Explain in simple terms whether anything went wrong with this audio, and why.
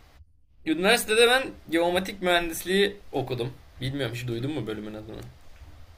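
Nothing went wrong here: the recorded speech comes through with no technical faults to be heard anywhere in it.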